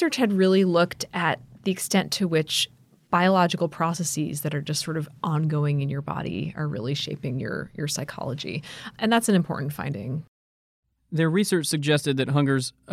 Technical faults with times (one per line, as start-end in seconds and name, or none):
none